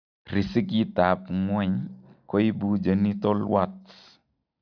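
No technical faults turn up anywhere in this bit of speech, so there's nothing here to flag.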